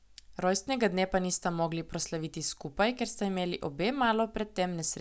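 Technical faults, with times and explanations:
No technical faults turn up anywhere in this speech recording, so there's nothing to flag.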